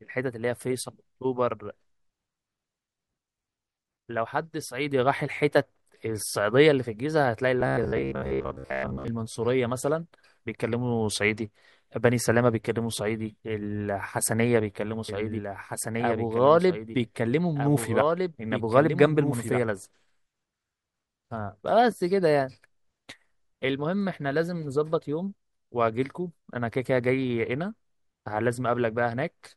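From 7.61 to 9.08 s the speech turns into a rigid, metallic buzz pitched at 66.7 Hz that only loosely tracks the words. This is robotic sound from repeated short buffers, likely caused by audio arriving too slowly, so most of the sound is replaced by repeats of a 15 ms fragment.

From 15.09 to 19.61 s a second, somewhat quieter copy of the speech, about 5 dB down, runs roughly one and a half seconds behind, dry and starting and stopping abruptly. This doubled audio track is likely caused by the same signal being captured again through a slower path.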